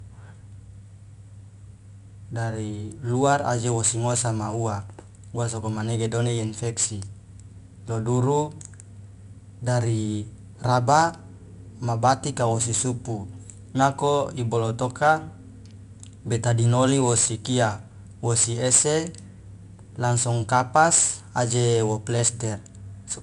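From start to finish the speech carries 4-bit ADPCM compression. Each sample is coded as a coarse step from a predicted value, so the error becomes a gritty hiss that rises and falls with the speech and roughens sharp onsets where the step size lags. Nothing reaches above 10.7 kHz, which fits a rate near 89 kbps. Unlike perceptual codecs, there is no swirling or warbling, only level-following grain.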